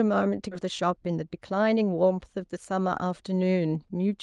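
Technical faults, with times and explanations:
0.51 to 0.53 s, skip ahead: The speech lurches forward with no silence or fill at the join, so the sound on either side of the cut butts together abruptly and roughly 0.7 s of material never plays. Audio that arrived late was already queued behind the missing stretch, so the missing stretch was dropped and playback jumped straight to the newer audio, shortening the delay by about that same amount in one step.
0.61 to 1.82 s, jitter buffer speed-up: Right after the jump, the speech sounds hurried for just over a second, running at about 109% speed while the pitch stays unchanged. The jitter buffer was still holding more audio than its target, so it trimmed many tiny slices, each one or a few pitch periods long, about a tenth of a second in total, to catch up, all through the Opus call path, which keeps content up to 12 kHz.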